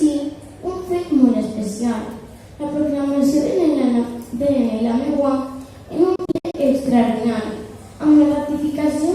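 From 6.16 to 6.55 s, a digital broadcast dropout mutes the sound in several short holes, up to 64 ms each, fitting about six failed frames, unlike a single clean gap. From 6.86 s to the end, a doubled audio track adds a full-band copy about a tenth of a second late and about 10 dB quieter, likely from a slower second capture path. It has no decay or room colour, unlike reverb.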